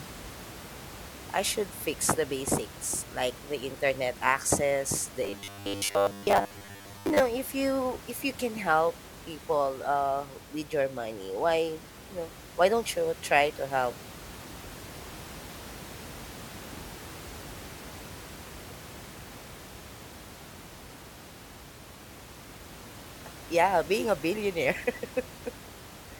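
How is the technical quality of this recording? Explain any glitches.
The recording has one clear glitch, robotic sound from repeated short buffers, with room noise sitting about 17 dB below the speech throughout. From 5.24 to 7.22 s, just before "if you if you", the speech collapses into a rigid, metallic buzz pitched at 100 Hz that only loosely tracks the words. The likely cause is audio arriving too seldom, so the software kept replaying a short fragment, which fits a 10 ms buffer, while most of the real audio in that stretch was skipped.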